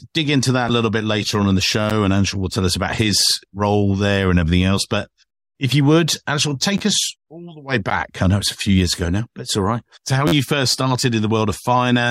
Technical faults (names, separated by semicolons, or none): repeated buffer; gap between stream segments